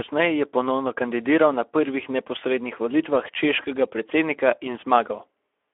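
Speech passed through the low-bitrate Speex codec on a narrow telephone line throughout, which fits about 11 kbps: audibly hoarse, noisy CELP texture, 300 Hz to 3.4 kHz band, nothing above 3.6 kHz.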